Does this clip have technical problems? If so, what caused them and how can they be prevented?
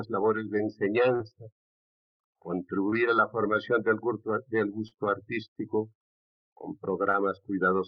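Yes, there's short concealed packet loss at four spots: 1.15 to 1.22 s, 2.90 to 2.94 s, 4.88 to 4.94 s and 7.12 to 7.16 s. About 40 ms went missing in the first and third, 20 ms in the other two. Each gap was patched by extending the preceding sound before blending back in, so you get a quick smear or wobble. A bigger jitter buffer, or forward error correction on the link, would cut these down.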